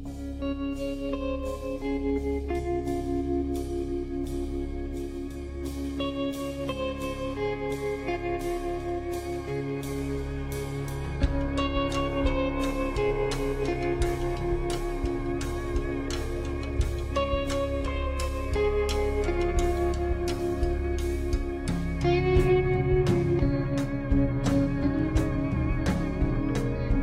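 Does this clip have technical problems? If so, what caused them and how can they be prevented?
No, there are no technical problems to report in this clip. Nothing in it calls for a cause to be traced or a fix to be applied.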